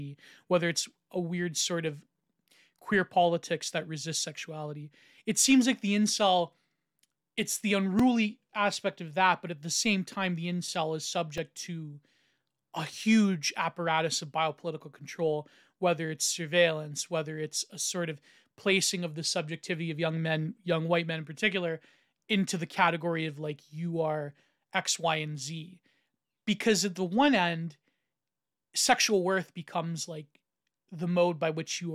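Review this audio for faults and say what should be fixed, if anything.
Two repeated buffer events occur in the speech, at 7.99 s and 11.38 s. Each time, fresh audio failed to reach the output on schedule, so the device replayed its previous block once. With blocks this short, about 2.9 ms, which fits a 128-sample buffer, the doubled segment and its hard join come across as a brief click rather than an audible stutter, and a few milliseconds of real audio are dropped. To prevent it, give the audio callback more headroom with a larger buffer or higher thread priority so new blocks are always delivered on time.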